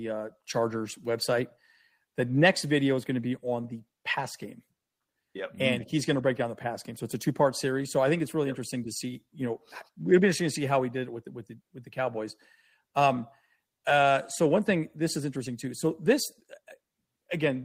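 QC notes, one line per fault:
Nothing to flag on this speech clip; no faults turned up anywhere in it.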